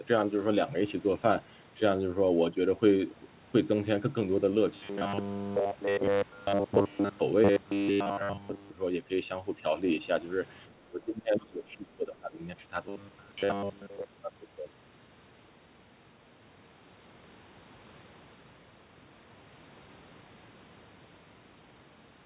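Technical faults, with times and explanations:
4.74–7.19 s and 7.44–8.70 s, robotic sound from repeated short buffers: a rigid 100 Hz metallic buzz, likely from most of the audio being replaced by repeats of the last 10 ms.
10.84–12.41 s, speech suppressed in double talk: the voice dips by up to about 25 dB, likely because the echo canceller ducked it while both sides talked.
12.89–14.05 s, robotic sound from repeated short buffers: the same 100 Hz buzz returns, likely from late audio being filled by repeating a 10 ms stretch.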